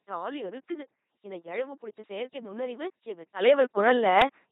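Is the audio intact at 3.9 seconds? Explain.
No. At 3.9 seconds you're inside a sudden gain jump that starts at 3.41 s and runs to the end. Level leaps up by about 12 dB in one step, background and all. It's likely a gain setting applied without any ramp, so nothing eases the change.

Underneath that, the whole clip has heavy LPC-10 vocoder damage, and it sounds like a 2.4 kbit/s coder. The speech comes out buzzy and robotic because each instant is forced fully voiced or fully unvoiced, and there's nothing above 3.9 kHz.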